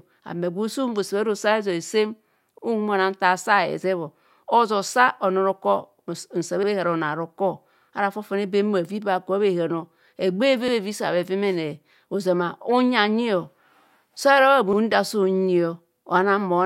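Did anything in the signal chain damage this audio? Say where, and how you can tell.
Yes, there's a case of overlapping chunks in how this speech was buffered or streamed. You get a short stutter at 2.58, 6.63, 10.68 and 14.73 s, spaced about 4 s apart. Each time roughly 50 ms of audio plays twice. That points to processing in 4-second blocks where each new block starts 50 ms before the previous one finished, so the tail gets repeated at every join.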